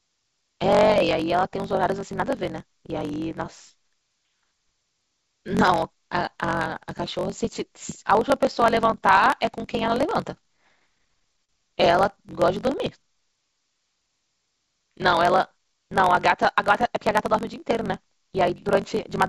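Right through the speech there's a block size mismatch (truncated) fault. One stage writes longer blocks than the next reads, so each block's tail gets chopped. You hear a steady buzz at 46.9 Hz, which fits a 1024-sample read, and everything runs about 1.12 times fast at roughly normal pitch.

From 10.42 to 11.50 s come repeated stalls (stutter). Packets kept showing up late, the jitter buffer ran dry nine times, and the receiver stretched the last sound to cover about 121 ms in total, the longest gap 44 ms. Nothing's lost, but it drags and stutters.

Then from 12.2 to 13.1 s there's a jitter buffer slow-down. The buffer was building up reserve by repeating pitch periods, adding about 103 ms. The speech plays at 91% speed, same pitch, with sounds drawn out.

Finally, 15.0 to 15.8 s brings a jitter buffer speed-up. The buffer was too full, so the receiver snipped out short pitch-period pieces, about a tenth of a second altogether. 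That stretch runs at 109% speed, hurried but same pitch, all within the G.722 call path's band that stops at 7 kHz.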